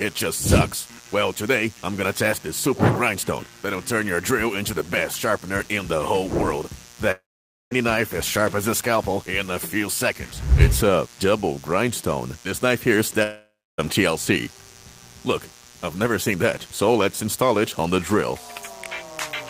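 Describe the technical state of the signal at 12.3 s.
A steady, raspy mains buzz sits under the sound at 12.3 s and throughout the clip, around 25 dB below it: switching spikes at twice the 60 Hz mains rate spray harmonics up to several kHz.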